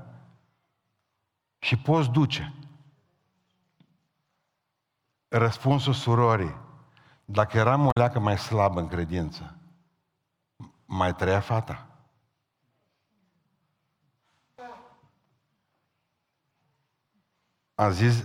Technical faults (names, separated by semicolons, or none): damaged data in a compressed stream